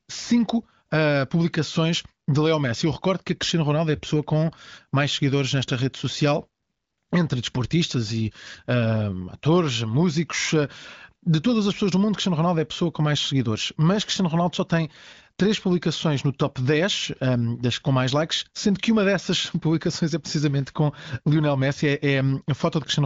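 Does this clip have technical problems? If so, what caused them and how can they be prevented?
No, there is nothing to fix: the speech comes through the AMR wideband (HD Voice) codec at 23.05 kbit/s, with the expected band limit and nothing above about 7.5 kHz.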